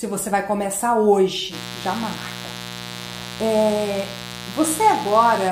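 Mains buzz enters at 1.5 s and runs to the end: switching spikes at twice the 60 Hz mains rate add a raspy harmonic buzz, roughly 15 dB below the signal.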